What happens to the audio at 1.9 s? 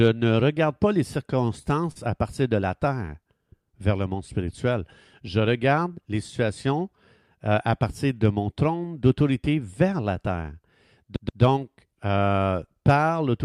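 Right around there, from 1.92 to 1.97 s, you get a short stall from a late packet. The jitter buffer ran dry because a packet showed up late, so the receiver held the last bit of speech for about 38 ms until the data caught up, then carried on from the same point. Nothing actually gets skipped; everything after it just lands 38 ms later. What you hear is a sound hanging on a touch too long, with a faint buzzy or dipped quality.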